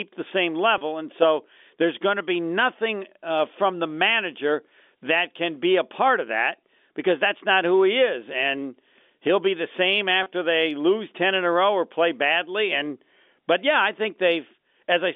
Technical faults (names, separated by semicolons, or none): packet loss with pitch repetition